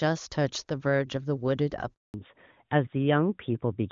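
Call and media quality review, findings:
Speech drops out abruptly at 1.94 s, dying away within a few tens of milliseconds, then silence for 200 ms until 2.14 s, with that audio lost. Handover gap: the network switch interrupted speech-frame delivery until the new link came up.

From 2.14 s to the end the speech turns dull and rough, with nothing above 4 kHz. Fallback to narrowband: after the handover the call dropped from the clean HD Voice AMR-WB path to a narrowband codec, which fits AMR-NB at 12.2 kbit/s.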